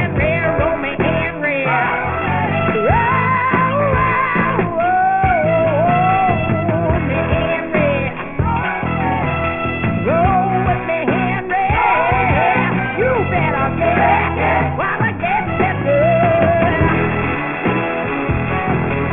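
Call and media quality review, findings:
Aliasing, present throughout the clip. Gritty, metallic overtones that don't track the source. Spectrum runs hard up to a 3 kHz edge, which fits a drop from 48 kHz to a 6 kHz rate. Probable component: a resampler with no anti-alias low-pass filter. Content above 3 kHz folds back down as false tones, roughly 15 dB below the signal.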